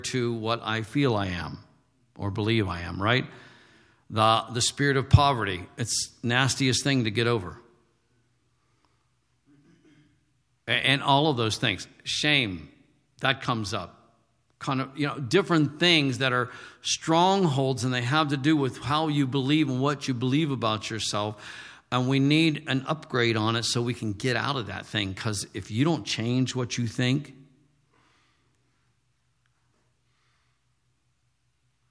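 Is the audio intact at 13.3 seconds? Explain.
Yes, at 13.3 seconds the speech plays through intact, with no audible fault at that moment.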